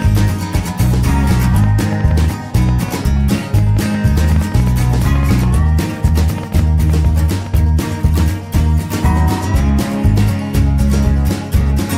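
From 0.02 to 7.55 s, a train of same-shaped clicks ticks unevenly at about 5.5 per second, unlike random crackle, likely from interference or a faulty connection or supply.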